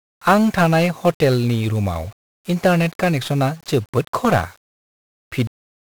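Speech runs through a constant fuzzy, crackling layer of broadband noise, with the upper frequencies smothered in hiss for the whole clip. This is heavy 1-bit DFPWM compression, consistent with roughly 48 kbps. Each sample keeps only one bit that nudges an adaptive level up or down, leaving dense quantisation noise. At 5.47 s the sound stops dead mid-utterance and falls straight to digital silence with no natural decay. This is a cut-off end: the final stretch of audio was never written out or played back.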